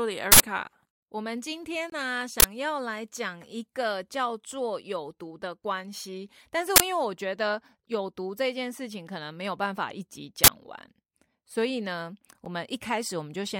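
At 0.32 to 0.40 s, and again at 2.40 to 2.44, 6.76 to 6.80 and 10.44 to 10.48 s, an uninitialised buffer plays stale memory instead of speech. Each is a short, loud burst of digital noise, a broadband slab on the waveform and spectrogram. At 1.90 to 1.92 s and at 12.45 s, a block of digital silence drops out, consistent with blocks of 1024 and 256 samples. These are a brief hole and a tick, each a flat near-silent gap with abrupt edges.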